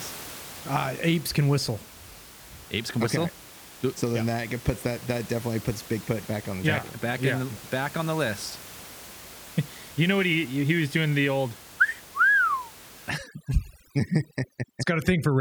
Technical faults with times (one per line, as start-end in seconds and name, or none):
13.10-15.40 overdone noise removal